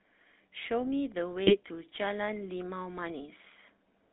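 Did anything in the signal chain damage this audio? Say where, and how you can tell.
Yes. At the codec stage, GSM full-rate coding runs throughout: buzzy, gravelly speech in a 200 Hz to 3.7 kHz band, which fits a 13 kbps pulse-excited vocoder.

From 1.46 to 1.56 s, GSM bit errors on the link corrupt a few frames' filter, pitch or gain values, producing a short squawky, gargling burst.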